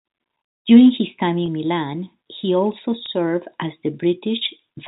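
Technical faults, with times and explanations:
1.46–1.48 s and 3.06–3.08 s, packet loss with pitch repetition: each time about 20 ms of audio goes missing, which fits a single lost packet. The receiver fills the hole by repeating the last pitch period, so instead of a silent gap or a click there is a brief held, slightly buzzy sustain, too short to fade out, before the speech resumes through the narrowband G.711 telephone path.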